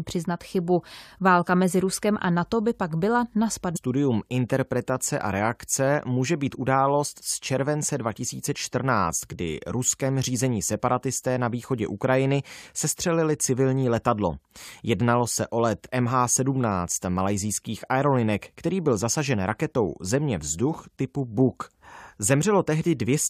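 At 3.75 s the speech jumps abruptly forward. It happens right after "by pak byla na", and the next thing heard is "interpretace a reakce může". A brief blip marks the join. The flow breaks without any pause, as if a stretch of the programme has gone missing. The likely cause is a stream segment skipped: one chunk of the segmented stream failed to load. The player then carried on with the following segment, leaving a hard splice between them.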